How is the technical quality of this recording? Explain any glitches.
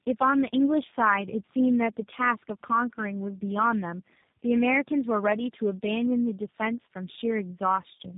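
Quality is poor throughout, with one fault present across the whole recording: tandem speech coding.

Tandem speech coding runs from start to finish. The speech sounds rough, muffled and warbly, with nothing above 3.8 kHz, which fits three low-rate telephone speech coders in a row, each re-coding the previous one's damage.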